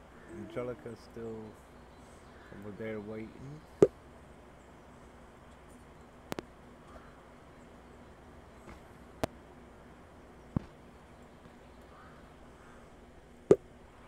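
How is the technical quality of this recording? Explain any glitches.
Four loud pops mar the recording. At 6.32 to 6.41 s there is a double pop. Single pops follow at 9.24 to 9.26 s and 10.57 to 10.59 s. Each jumps roughly 25 dB above the surrounding sound, which continues underneath. The likely cause is a sudden voltage step, from a switch, connector or static, shaped by the following circuitry into a sharp thump.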